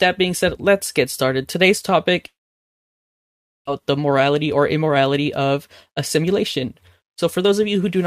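From 2.27 to 3.69 s the speech drops to near silence, likely a long network dropout; about a second is lost, leaving a flat waveform and blank spectrogram. From 3.78 to 7.99 s a jitter buffer speed-up trims tiny pitch-period slices. Speech runs 7% faster at unchanged pitch, and its harmonics look slightly time-compressed.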